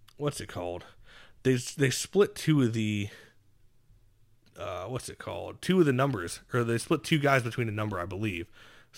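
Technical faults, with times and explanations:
5.30 to 8.98 s, sample clock jitter: from 5.30 s to the end, the converter's timing wanders, so each sample is captured slightly early or late by something on the order of a few microseconds. Where the speech waveform changes fastest, that timing error turns into the largest amplitude error. The result is a grainy hiss riding on the speech, roughly 30 dB below it, strongest on loud and bright sounds and gone in the pauses.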